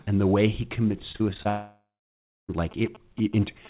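Starting around 1.12 s and running to 1.47 s, there's repeated packet loss (robotic sound). Five short holes open up in quick succession, the longest about 36 ms. Each one gets papered over by stretching the last bit of speech, so roughly a third of that stretch is concealment rather than real audio. That's why it comes across choppy, with fragments of speech clearly missing.

Right after that, from about 1.49 s to 2.50 s, there's a long network dropout. A full second of audio never arrives, which is most likely a dropout in the network rather than anything at the source. The receiver keeps extending the last sound for a moment as a fading tail. For the last 620 ms or so of the gap you get plain silence. When the speech comes back, that missing second is simply gone.

From 2.71 s through to the end there are GSM signalling bursts: a galloping dit-dit-dit of short buzzes at 217 Hz, sitting about 20 dB below the speech. 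That's a nearby 2G phone talking to its network in short radio bursts, as it does before a call or text arrives. The audio circuitry rectifies that RF and turns it into audible noise. The call itself runs through G.711 at 64 kbps, which leaves nothing above 4 kHz.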